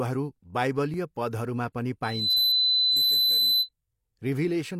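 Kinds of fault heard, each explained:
Dropped buffer (overrun): At 0.94 s, just before "पदहरूमा पनि", the speech jumps forward with no gap of silence. It points to an overrun, likely from the software failing to read its incoming samples before the hardware wrote over them. A sliver of audio, around a millisecond and a half, is lost, and the two sides of the cut are spliced straight together.
Loudspeaker feedback squeal: After "पदहरूमा पनि", from 2.03 s to 3.69 s, a steady 4 kHz whistle grows over roughly a third of a second and settles at about 5 dB above the speech. This is acoustic feedback. The microphone is picking up the loudspeaker it is driving, and at 4 kHz the gain around that loop is above unity. The tone keeps feeding itself.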